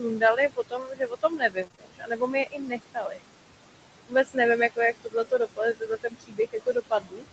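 A speech recording carried over a call, with noise suppressor artifacts throughout: the suppressor pulls the room noise down by about 21 dB, so the background, which sits only about 11 dB under the speech, drops away in the pauses and swells back beneath the voice. That frame-by-frame pumping of the noise floor separates it from the speech cut by the noise suppressor, where the speech itself goes missing. The suppressor mistakes parts of the speech for noise across 0 to 3.19 s, affecting roughly two seconds of it with drops of up to about 22 dB. It happens again from 4.08 to 4.37 s, just before "jako jak", at up to about 18 dB over a fifth of a second or so, and from 4.96 to 7.24 s, after "jako jak", at up to about 21 dB over around a second. Soft consonants and word tails come out swallowed or faint rather than distorted. Between 1.55 and 1.65 s, a lost packet was rebuilt from error correction. 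The decoder played the low-bitrate backup copies carried in the following packets, which fits three 20 ms packets and about 60 ms of audio. There is no gap there, just a stretch that sounds rougher and grainier than its surroundings. Because the call already stops at 8 kHz, no extra treble loss marks it. Right after, short concealed packet loss follows at 1.67, 1.72 and 1.76 s, ending by 1.79 s. Each of these is a 20 ms hole that the receiver filled by extending the preceding sound. Unlike the coarse but continuous rebuilt stretch, these come across as quick smears or wobbles, and a brief consonant can vanish inside them.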